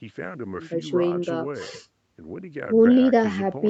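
No technical faults can be heard in this speech recording.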